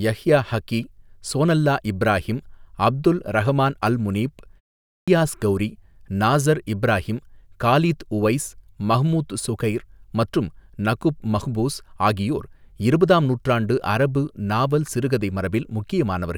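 A clipped start after a pause hits this speech recording at 4.82 s. After a 0.3 s silence the output device has gone to sleep and needs 256 ms, until 5.08 s, to wake, so the returning speech begins abruptly with its first sounds swallowed.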